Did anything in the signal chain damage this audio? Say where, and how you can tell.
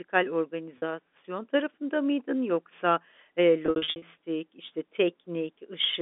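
Yes, at the network stage: packet loss with pitch repetition. At 0.78–0.82 s about 40 ms drops out, and from 3.66 to 4.02 s, after "tarafında mıydın yoksa eee", gaps in runs of up to 60 ms are bridged by repeated pitch periods. Spectrograms show frozen, smeared harmonics; waveforms show identical repeating cycles.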